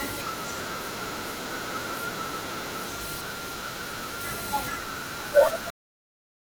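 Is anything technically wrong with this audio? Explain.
Yes, there's a cut-off end. At 5.70 s the speech stops dead partway through a sound and drops straight to digital silence for the rest of the clip, with no natural decay. The final stretch of buffers was never written out, so playback simply ends there.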